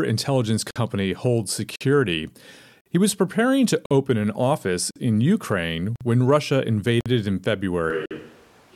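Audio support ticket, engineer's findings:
Gap between chunks: hard-edged 50 ms silent holes at 0.71, 1.76, 2.81, 3.86, 4.91, 5.96, 7.01 and 8.06 s, one per second. Chunked delivery or playback is leaving silence at each 1 s join.

Switch to a distant microphone: from 7.90 s to the end, the voice turns abruptly roomy and hollow, thinner in bass, about 5 dB quieter, with room noise roughly 30 dB below speech. Likely the close-mic feed dropped.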